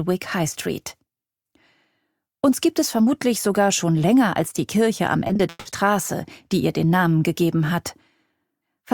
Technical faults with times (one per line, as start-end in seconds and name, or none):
5.27-5.67 repeated packet loss (robotic sound)